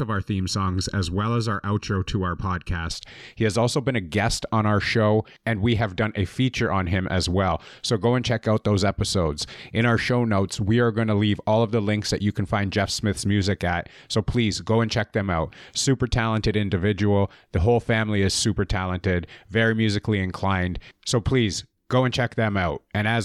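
Hollow, phasey speech opens the clip from 0.0 to 2.91 s, with the low midrange thinned by fixed notches. It is channel delay (comb filtering): one channel runs under a millisecond late and is summed to mono, cancelling evenly spaced frequencies starting near 700 Hz.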